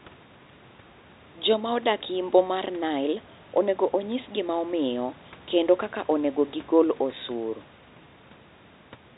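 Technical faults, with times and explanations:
No technical faults can be heard; the speech is limited to the telephone band, with nothing above 4 kHz, which fits 64 kbps G.711 mu-law coding, and the room's own background noise sits about 31 dB below it.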